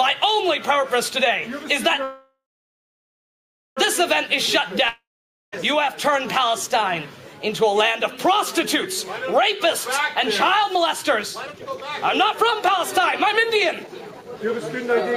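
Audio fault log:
2.03–3.79 s, call audio freeze: the last sound smears into a fading buzz, then about 1.4 s of silence, and the audio resumes right where it stopped with nothing lost. Delayed packets likely drained the jitter buffer, so a 1.73 s gap was inserted.
4.89–5.54 s, long network dropout: the same fading buzz trails off into half a second of silence, but this time the audio comes back further along. Roughly 0.64 s never arrived, so that stretch is simply gone, most likely from a network outage.
10.64–11.85 s and 12.33–15.14 s, jitter buffer speed-up: the sound rushes along at the same pitch, about 123% speed in the first run and 114% in the second. The buffer was overfull, so the receiver kept snipping tiny pitch-period slices, trimming roughly 0.3 s and 0.4 s.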